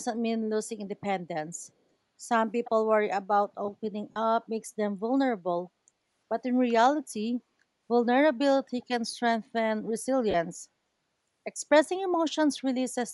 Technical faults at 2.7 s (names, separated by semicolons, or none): Bluetooth LC3 compression; echo leak